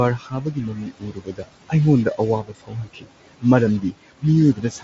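From start to finish, the speech carries distortion. Even the pauses fill with a gritty noise. This is likely a stuck bit in the converter or data path.

Noise suppressor artifacts also run throughout. The room noise is pulled down by about 18 dB between phrases, then rises under the speech.

The suppressor mistakes speech for noise four times. This is speech cut by the noise suppressor. From 0.18 to 1.49 s, about a second of it is turned down by up to about 17 dB. From 2.43 to 3.44 s the drop again reaches about 17 dB. From 3.82 to 4.23 s it reaches about 18 dB. From 4.55 s to the end it reaches about 12 dB. In each stretch, softer sounds and word endings come out swallowed and faint.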